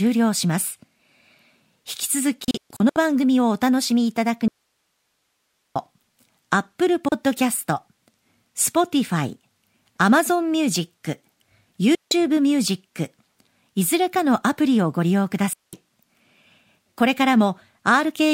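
From 2.44 to 2.97 s, a digital broadcast dropout: the receiver lost frames and muted, so the speech breaks into several short silent holes totalling 288 ms, each with a 3 ms fade. From 4.48 to 5.76 s, an audio dropout to a faint residue: the signal likely vanished while the path stayed live, leaving only hiss about 50 dB down. Further broadcast dropouts mute the speech abruptly at 7.08 s for 32 ms, 11.95 to 12.12 s, and 15.53 to 15.73 s.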